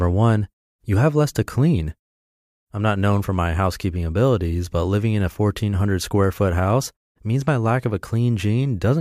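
No faults are audible anywhere in this speech recording.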